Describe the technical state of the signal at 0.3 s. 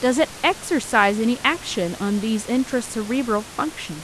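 At 0.3 s the speech signal is intact, with only the room's own background noise sitting about 17 dB below the voice.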